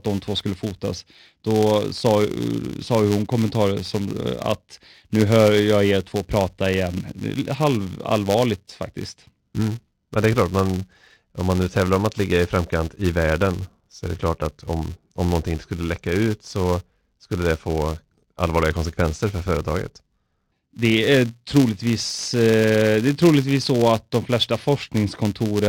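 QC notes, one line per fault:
Throughout, filter restarted on every block: there's a steady 200 Hz buzz riding under the speech, and it swells and fades with the level, loud on strong syllables and gone in the gaps. That's the filter dropping its state and starting each block from silence, so every block opens with a tiny transient. Those ticks land every 5 ms, which points to blocks that short, and at that rate they fuse into a buzz instead of separate clicks.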